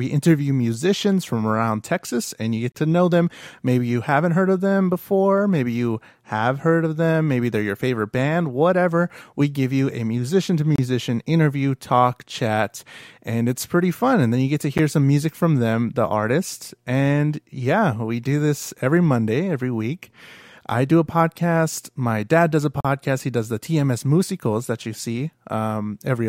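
Gaps between stream segments cut the audio at 2.72, 10.76, 14.78, 18.78 and 22.81 s. Segment timestamps don't meet, so hard-edged silences of 4 to 41 ms appear. Their spacing fits 4-second segments.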